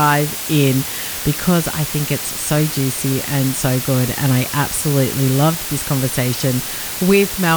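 Throughout, the speech has low bit depth with dither. Rounding error becomes a constant, even hiss about 10 dB below the speech, without distortion, consistent with 4-bit audio.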